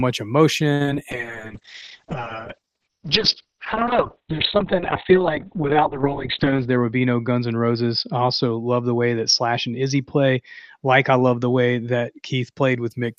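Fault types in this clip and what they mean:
Repeated packet loss (robotic sound) at 0.73 to 0.95 s: four packets went missing in quick succession, the longest hole 70 ms. Each was patched by extending the previous sound, so nearly half this short stretch is synthetic fill, heard as choppy speech with fragments dropped.
Call bitrate drop from 1.12 to 12.96 s: the bandwidth estimate collapsed and the encoder fell from 32 to 7 kbps, staying at the bottom for about 4.3 s. Coarser coding plus a cut-off near 4 kHz leaves the speech muffled, rough and watery, lacking its upper range.
Jitter buffer speed-up at 6.44 to 7.09 s: with surplus audio queued, the receiver trimmed small pitch-period slices repeatedly, removing roughly 70 ms in total. Speech runs about 10 percent faster at unchanged pitch, giving a briefly hurried delivery.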